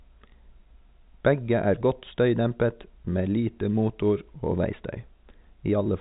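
Listening to the speech, carried in the band-limited sound of G.711 telephone coding, nothing stood out as a technical fault at any point.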